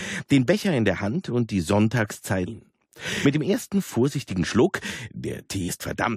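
At 2.45 s, 3.24 s and 5.68 s there is damaged data in a compressed stream: bytes inside the encoded file have been lost or corrupted, so the decoder misreads the affected frames, drops out of sync and has to hunt for the next valid frame header before it can carry on. Each time this produces a very short chirp or blip, under 20 ms, that cuts abruptly across the audio.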